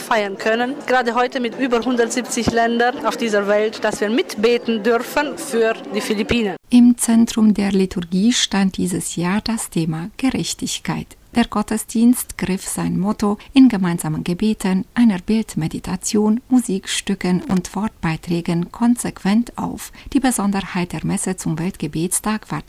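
At about 17.42 s there's a short burst of loose connector crackle, lasting roughly 0.16 s until around 17.58 s. You get an irregular scratchy crackle sitting on top of the sound. That's what happens when a worn or dirty contact shifts and keeps making and breaking: the signal gets chopped into fragments, and any DC sitting on the line turns each break into a little pop.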